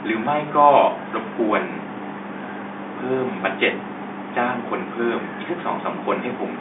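Nothing's wrong with this one: it's just speech coming over an ordinary telephone line, with the usual narrow phone bandwidth and a faint bit of room noise sitting far below the voice.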